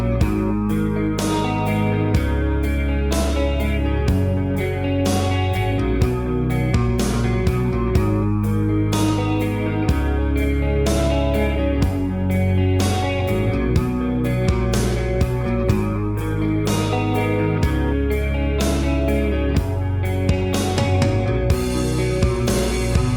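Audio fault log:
15.45–16.85 s call bitrate drop: coarser encoding turns the sound rough and muffled, consistent with a fall from 32 to 15 kbps; the spectrogram's upper band thins out.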